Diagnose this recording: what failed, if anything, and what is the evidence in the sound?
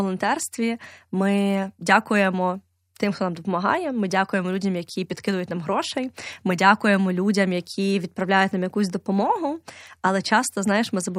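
Nothing failed in this recording.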